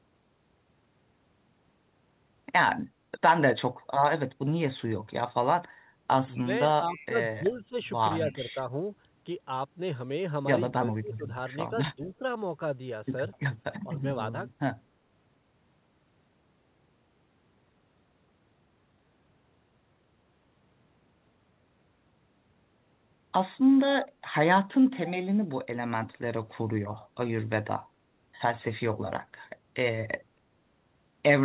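The clip is speech carried over a narrowband call path, with nothing above 4 kHz on a spectrogram, consistent with G.711 mu-law telephone coding. Its level drops audibly in three places, which points to speech suppressed in double talk, likely an echo canceller turning the talker down while the far side was also speaking. The drops fall at 6.38 to 8.8 s (deepest about 10 dB, roughly a second in total), at 10.76 to 12.23 s (deepest about 20 dB, under a second in total) and briefly at 13.84 to 14.04 s (about 5 dB). On a waveform these show as sudden notches in the envelope, and on a spectrogram as patches where energy thins or disappears across the band. Echo leak is also audible: a faint delayed copy of the voice trailing by 244 ms. It lasts from 6.93 to 8.35 s, about 25 dB below the direct speech, then recurs as short scraps at 13.33 to 13.37 s, 24.02 to 24.08 s and 26.99 to 27.07 s, at levels from roughly 20 to 35 dB down. 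It appears as weak, smeared repeats of earlier harmonic patterns, offset by about a quarter second on the spectrogram.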